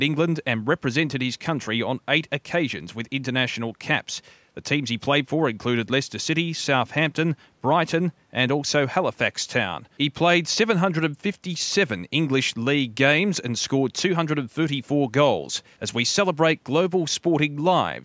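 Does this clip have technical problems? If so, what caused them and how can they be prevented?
No, there's nothing wrong here: the speech just carries the usual call microphone processing, with the lowest bass trimmed and nothing above about 8 kHz, which is normal for a call, so there's nothing to prevent.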